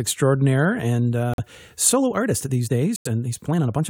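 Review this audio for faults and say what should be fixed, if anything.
Corrupt frame muted, at 1.34 to 1.40 s and again at 2.96 to 3.07 s. The speech drops abruptly into silence for about 60 ms the first time and about 110 ms the second, gaps that match roughly three and four compressed frames. Damaged bits in those frames made the decoder reject them, and the player filled each hole with silence. The surrounding timing stays intact, so the speech resumes exactly on schedule. To prevent it, protect the stream with error checking and retransmission, or use decoder concealment that interpolates lost frames instead of muting them.

Time-stretched section, from 1.9 s to the end. The pace of the speech jumps to about 1.49 times the earlier rate while the pitch stays the same, so this stretch sounds rushed. The likely cause is software squeezing the audio to fit a target length, holding pitch by discarding short slices of the waveform. 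To prevent it, keep the original timing, or edit content to fit the length rather than compressing the audio's playback rate.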